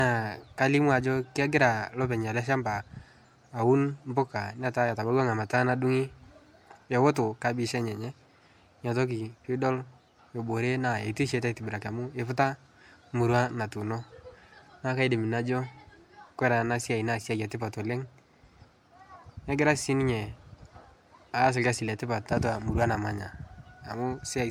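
All the way through, the speech has that swirly, hollow smear of generation loss, likely from roughly four passes through an MP3 codec at around 96 kbit/s.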